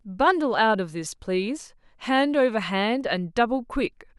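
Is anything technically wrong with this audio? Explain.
No, the speech signal shows no technical faults that a listener can pick out.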